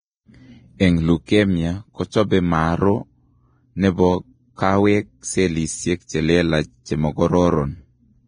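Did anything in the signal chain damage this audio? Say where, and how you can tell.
Yes. Vorbis compression runs through all of the speech: nothing survives above 9.7 kHz, and the treble that remains is hissy and grainy, with roughened tones and softened consonant onsets. That is the codec stage, most likely a Vorbis encoder at a low setting. The damage is heavy, consistent with roughly 21 kbps. The encoder coded the upper detail so coarsely that it collapsed into noise carrying about the same energy, and everything above the cut-off was dropped.

Pre-echo sits at 0.78 to 0.80 s and again at 1.26 to 1.28 s. In each case a short hiss of about 26 ms and 24 ms respectively runs ahead of a sharp onset, and that onset sounds smeared rather than crisp. This is also a codec-stage fault. The transform spreads its quantisation noise across the whole block, so noise sized for the loud attack leaks into the quiet stretch just before it.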